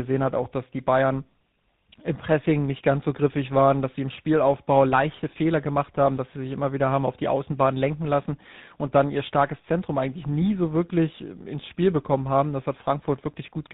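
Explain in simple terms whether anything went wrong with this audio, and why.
Yes, something went wrong throughout the recording: tandem speech coding. The call passed through two different speech compressors, one after another, so the second had to squeeze an already damaged signal. The speech sounds rough, muffled and warbly, with nothing above about 3.8 kHz.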